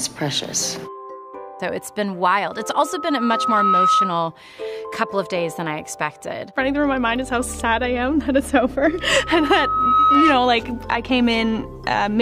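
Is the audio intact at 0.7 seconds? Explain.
Yes, at 0.7 seconds the audio is intact, with no dropout, click, distortion or other fault at that moment.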